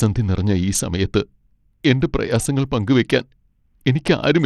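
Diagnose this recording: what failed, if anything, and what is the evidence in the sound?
The codec stage is where it goes wrong: the speech carries plainly audible Bluetooth SBC compression damage from start to finish. The top end keeps dropping out and flickering back, and a gritty, aliased haze sits on every syllable. The likely cause is an SBC link starved of bits, which fits something like an 80 kbps stream. The encoder hands the weak upper sub-bands little or nothing and quantises everything else coarsely.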